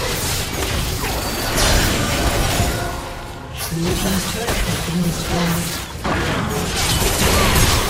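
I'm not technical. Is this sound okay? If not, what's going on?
No. From 6.68 to 7.70 s the sound abruptly slows by 6.4% and drops about a semitone (115 cents), then snaps back. This is a drift correction step, likely from software keeping two clocks in sync. Unlike wobbly tape-style wow, it's one sudden jump.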